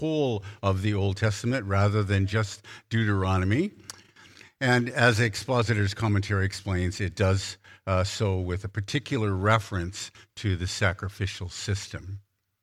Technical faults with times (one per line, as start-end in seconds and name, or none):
none